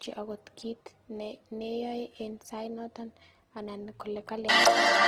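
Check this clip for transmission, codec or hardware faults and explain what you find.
The speech carries plainly audible Opus compression from start to finish. The sound is rough and grainy, with a noisy texture where tonal detail should be, but little of the swirling associated with MP3. This is likely the music-oriented CELT mode of Opus at a low bitrate, consistent with roughly 16 kbps. Starved of bits, the encoder preserves each band's energy but refills the detail by folding lower bands or injecting noise. Bandwidth remains fullband, extending to about 20.3 kHz.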